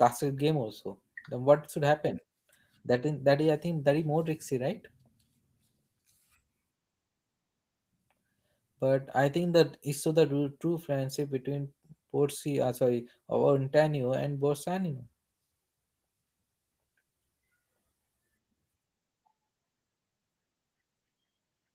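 No technical faults can be heard anywhere in this speech recording. The Opus voice compression is audible only as a light coding texture, and the full-bandwidth top end points to its hybrid mode at a bitrate around 20 kbps.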